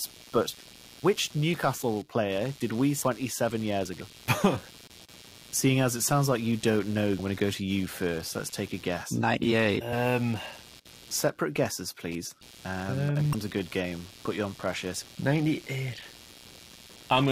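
Right from the start there's computer activity noise: a buzzy pulsing at around 100 Hz, roughly 25 dB under the speech, riding in through the shared ground as the machine's load shifts, so it wanders independently of the talking.

Then come five quick blips of damaged data in a compressed stream: at 3.02 s after "player did we", at 4.00 s, at 7.18 s between "like you don't know" and "going to go to", at 9.92 s, and at 13.33 s between "um and" and "a good". Each time the decoder hits corrupt frames, loses sync and skips ahead to the next header, leaving a short glitch.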